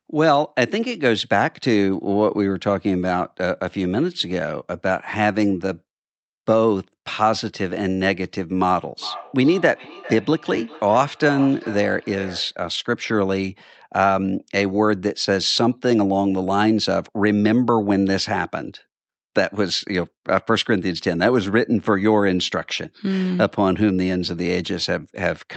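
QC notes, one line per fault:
8.99 to 12.6 s, feedback echo between two devices: the sound comes back around at a steady spacing of roughly 400 ms, with the loudest return about 15 dB below the direct speech. Two devices in the same room are on one call, and one is playing out what the other's mic sent. That mic hears it again, and neither echo canceller catches it because each only removes its own device's playback.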